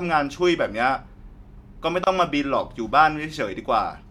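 At 2.04 to 2.07 s the speech stops dead for about 28 ms and then resumes exactly where it left off. This is a gap at a join of encoded pieces. Separately encoded segments were spliced without removing the encoder's leading delay and final-frame padding, so that silence stays in the stream. Joins fall 4 s apart, consistent with segments about that long. On a spectrogram it shows as a thin vertical blank band; the waveform drops to a flat line with softened edges.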